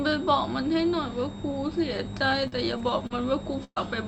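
A switching supply whistle runs through the whole clip, a thin high tone wandering between 3.69 and 3.83 kHz, roughly 25 dB below the speech. On a spectrogram it is a narrow, slightly wavering horizontal line near 4 kHz, sitting under the call path's 8 kHz upper limit.

From 2.35 to 3.78 s, repeated packet loss gives the speech a choppy, robotic edge. The stream drops out four times, the longest hole about 0.12 s, and each gap is patched by stretching the preceding sound, covering around 15% of the stretch. The spectrogram shows smeared, repeated harmonic blocks, and the waveform shows abrupt seams.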